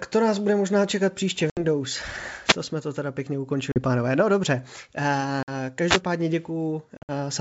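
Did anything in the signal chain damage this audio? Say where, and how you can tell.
Yes. The network stage dropped audio on this G.722 wideband call. Packet loss on the ADPCM call leaves hard-edged silent holes at 1.50–1.63 s, after "bude možná čekat příště", and at 3.72–3.79 s, after "jsme to teda pěkně". Further holes come at 5.43–5.50 s and 6.97–7.12 s. Lost audio runs 70, 40, 50 and 110 ms, which fits roughly 10 ms packets. The last loss is scattered over 120 ms, with a longest run of 60 ms. After each gap, the decoder's predictor and step size no longer match the sender's. The sound comes back slightly distorted.

The second fault sits at the microphone's radio link. A wireless microphone noise hit gives a short swish of static at 2.45–2.57 s, just before "jsme to teda pěkně", and again at 5.86–6.01 s. The FM signal faded, so receiver noise rose.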